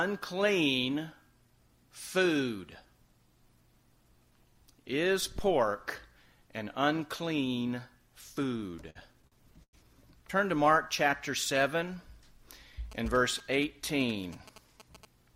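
From 8.71 to 9.75 s, packets arrived late and the jitter buffer kept running dry, producing repeated stalls (stutter): ten brief holds, the longest 100 ms, that drag the audio. From 12.92 to 15.05 s, a nearby 2G phone's signalling bursts were rectified into the circuit as GSM signalling bursts, a galloping dit-dit-dit of short 217 Hz buzzes roughly 20 dB below the sound.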